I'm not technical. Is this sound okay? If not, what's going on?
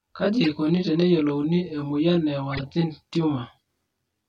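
No, there are two problems.

The first runs through the whole clip: channel delay (comb filtering). The recording had two channels, one arriving about 20 milliseconds later than the other, and they were combined into one. Where the two copies meet out of step, certain pitches cancel at regular steps from the very bottom of the range upward. That gives the speech a rough, slightly doubled sound from start to finish.

The second is a corrupt frame decoded, heard twice. The audio was stored in small compressed chunks, and a few of them were damaged but played anyway, so sound lands at the wrong pitches. At 0.42 to 0.52 s, just before "teneyiolouni e", and again at 2.50 to 2.64 s, a handful of chunks in a row produce a short, fairly loud chirpy or noisy burst that doesn't belong to the speech.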